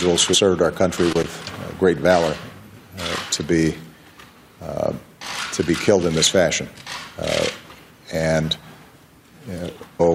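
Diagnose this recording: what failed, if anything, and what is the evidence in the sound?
Damaged data in a compressed stream at 0.33 s and again from 9.99 to 10.01 s, a codec and storage fault: each is a brief glitch where corrupted bytes made the decoder misread the affected frames and lose sync until it locked onto the next valid frame header.

Loose connector crackle from 1.11 to 1.25 s, in the analogue wiring: an irregular burst of crackle and scratching lasting about 135 ms, as a worn or dirty contact rapidly made and broke, chopping the signal and adding pops from any DC on the line.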